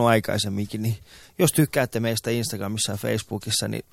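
At about 2.07 s, right after "aikaisemminkin niin jos tykkäätte", there's a corrupt frame decoded: a short squeaky blip lasting only one frame. Some bits in that compressed frame got flipped, and the decoder played it anyway, so misread gains and codes threw energy into the wrong frequencies. The junk peaks at roughly -20 dBFS, a brief chirp before everything snaps back.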